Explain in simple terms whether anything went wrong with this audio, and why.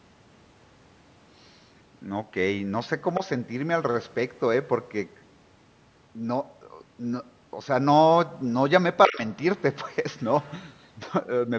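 A second, fainter voice slips in underneath the talker's at 3.15 to 3.2 s, 9.06 to 9.17 s and 10.42 to 10.52 s. This is the other side's voice leaking through, likely because the device's loudspeaker carried into its microphone and the echo cleanup missed some. Unlike a distortion of the talker's own voice, this is a different voice, in brief scraps. It is faint at 3.15 s, very faint at 10.42 s and most noticeable at 9.06 s.

From 9.07 to 9.21 s, during that loudest leak, the talker's own voice sinks sharply for about a sixth of a second. This is speech suppressed in double talk, likely because both sides spoke at once and the echo cleanup turned everything down together. It differs from leakage because something is taken away from the talker rather than added.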